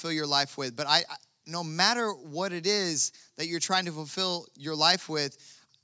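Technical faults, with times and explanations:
Nothing stood out on listening to this speech.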